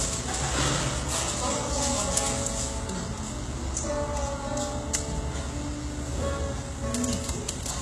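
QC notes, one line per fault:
Throughout: HE-AAC compression. The audio was likely squeezed through HE-AAC at a very low rate, around 16 kbps, so only the lower spectrum is truly coded and the treble is rebuilt by copying lower bands upward under a coarse envelope. Nothing comes through above about 12.3 kHz. The top end is still there, but its partials don't line up with the real content below, so high, hissy detail sounds gritty and metallic, and the coding damage is plainly audible.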